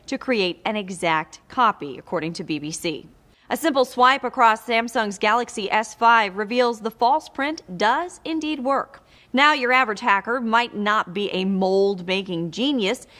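On listening, nothing stood out as a technical fault anywhere in the audio.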